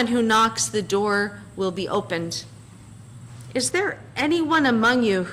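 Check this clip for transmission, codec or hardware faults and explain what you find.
One fault is present, in the final stretch of the clip. From 3.71 s to the end at 5.32 s the sound turns dull and muffled, its top end rolling away smoothly. This is de-emphasis applied wrongly: a treble cut meant to reverse pre-emphasis was applied where none existed, or applied twice, leaving 10 kHz about 8 dB below 1 kHz.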